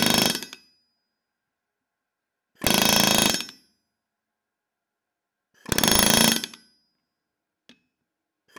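A recording of sounds broken by integer overflow in three places: 0.03 to 0.26 s, 2.67 to 3.30 s, and 5.72 to 6.32 s. Driven about 5 dB past full scale in the first two and about 8 dB in the last, the loudest peaks wrap to the opposite sign and jump across the whole range. The result is violent, harsh cracks rather than clipping's flattened, buzzy tops.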